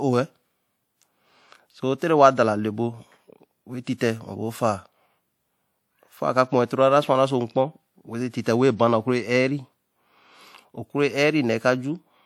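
At 3.97 s, just before a sharp attack in the speech, there is pre-echo. The codec's quantisation noise, sized for the loud onset, fills the quiet 36 ms ahead of it. A brief hiss leads in. The attack itself sounds soft and smeared.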